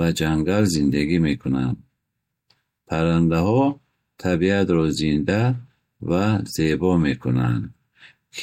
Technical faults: none

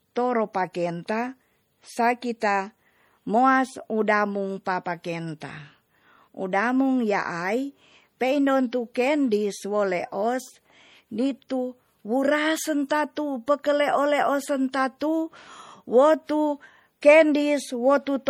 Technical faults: MP3 compression; pre-echo

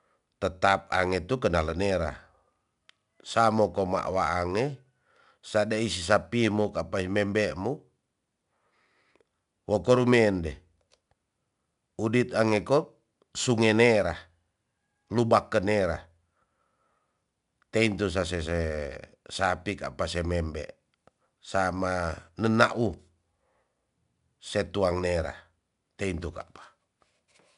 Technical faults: 4-bit ADPCM compression

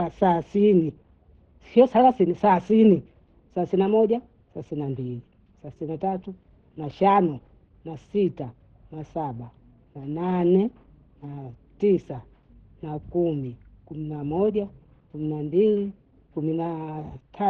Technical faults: Opus compression

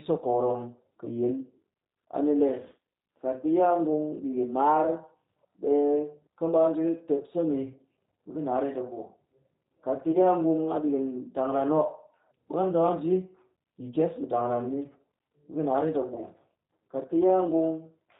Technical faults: G.729 codec; VoIP packet loss concealed by the speech codec

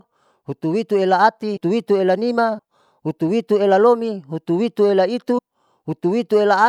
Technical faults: compressed frames skipped

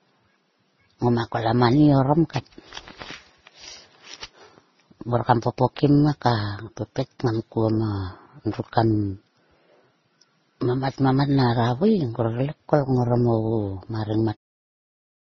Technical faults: transcoding between lossy codecs

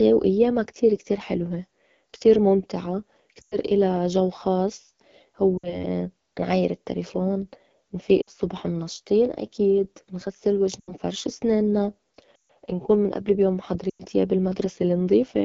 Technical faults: AMR wideband (HD Voice) codec; lost AMR speech frames

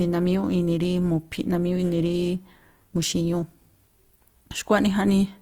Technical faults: Opus compression; clock slip clicks

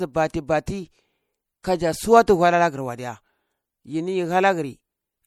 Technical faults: MP3 compression; pre-echo

